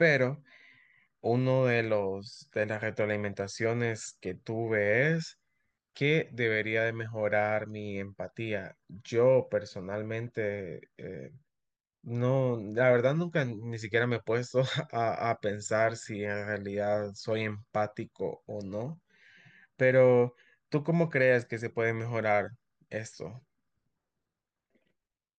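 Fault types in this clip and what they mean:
Nothing in this speech recording stood out as a technical problem on listening.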